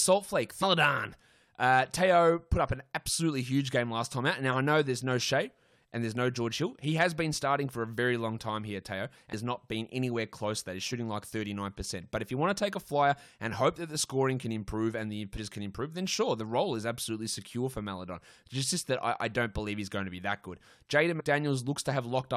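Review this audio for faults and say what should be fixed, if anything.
Compressed frames skipped at 0.62, 9.32, 15.36 and 21.19–21.21 s: speech jumps ahead roughly 0.4, 0.2, 0.3 and 0.07 s, joined by brief smeared blips, consistent with whole 23.2 ms frames missing. Verify file integrity after transfer and re-encode from an intact source.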